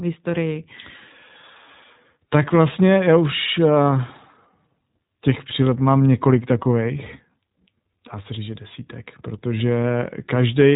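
Speech runs through the iLBC codec for its whole length, with nothing above 3.8 kHz and a plainly audible rough, synthetic edge. Unlike a simple band limit, frame-by-frame independent excitation coding adds graininess, which fits iLBC's 20 ms mode near 15.2 kbps.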